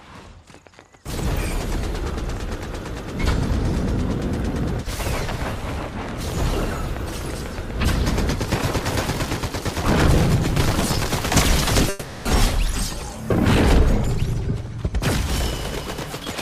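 From 11.89 to 12.27 s, a long network dropout likely occurred. The last sound smears into a fading buzz for about 0.36 s. Audio then resumes, with that stretch missing.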